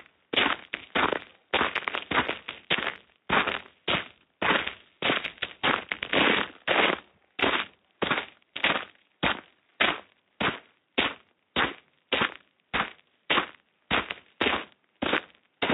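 No technical faults are audible.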